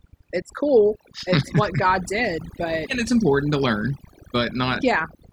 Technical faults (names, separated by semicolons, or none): overdone noise removal